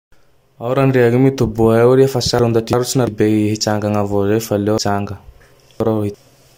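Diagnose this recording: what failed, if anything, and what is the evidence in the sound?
Speech jumbles briefly at 2.39–3.07 s and again at 4.78–6.14 s. These are chunks out of order: 0.34 s blocks replay in the wrong sequence with nothing lost. The sound suggests one block one slot late, then one three slots late, a buffer or network reassembly failure.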